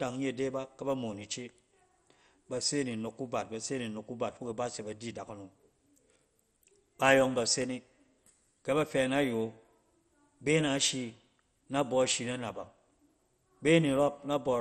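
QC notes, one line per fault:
Throughout: MP2 compression. The speech sounds dull and gurgling, with a granular, watery grit and nothing above 13.9 kHz. This is the sound of a subband coder starved of bits: the upper bands are switched off entirely while the lower bands flicker in and out and are coarsely quantised. The damage is heavy and points to a low bitrate around 56 kbps, likely from MPEG Layer II encoding.
7.62–7.64 s: loud pop. Right after "yɔng ba se", a single sharp pop, roughly 5 dB above the speech level, lands on top of the audio while the talking continues underneath. A sudden step or spike in voltage enters the signal path, and the following circuitry turns it into a brief click-thump about 20 ms long. The likely cause is a plug, switch, static discharge or driver glitch.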